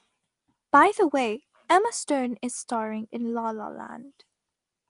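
From start to finish the speech carries a rough, hissy halo and a smeared, underwater quality. The damage is plainly audible, likely from Nellymoser compression, the old Flash microphone codec. Its coarse fixed bit budget per short block leaves weak bands empty and fills them with noise, which fits a rate near 44 kbps. A spectrogram would show a hard ceiling at 10.6 kHz and grainy, speckled noise patches between the blurred harmonics.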